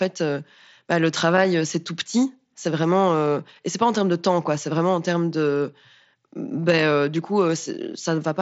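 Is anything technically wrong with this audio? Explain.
No, there's nothing wrong here; this is just speech over a wideband mSBC Bluetooth headset link, so it tops out around 8 kHz and carries the light graininess on louder moments that this codec normally leaves behind.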